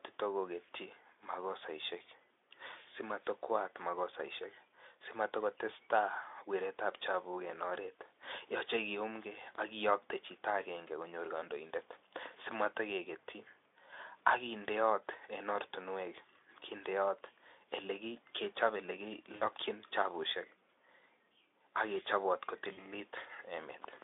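Speech packets dropped out at 19.35–19.43 s and again at 22.73–22.90 s, roughly 60 ms and 40 ms of lost audio. This is VoIP packet loss concealed by the speech codec. The Speex decoder stretched its last pitch and filter into a fading, buzzy tone or coloured noise, and the speech stayed weak briefly after each gap.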